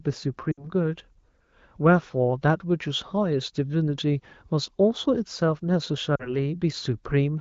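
Lost AMR speech frames at 0.51 to 0.68 s and again at 6.15 to 6.36 s interrupt this wideband-coded speech. In each gap the decoder, lacking valid frames, repeats the last good pitch and vocal tract settings at falling gain, so the sound drops to near silence within two frames. The first dropout fits about three 20 ms frames and the second about two, with the speech returning briefly weak or rough afterwards.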